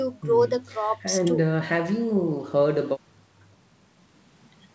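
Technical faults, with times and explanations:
Nothing here counts as a fault: the speech simply carries the ordinary marks of a call, with the content stopping around 8 kHz the way you'd expect from wideband call processing and a G.722-style codec.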